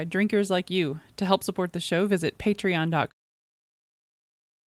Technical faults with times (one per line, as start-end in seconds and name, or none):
none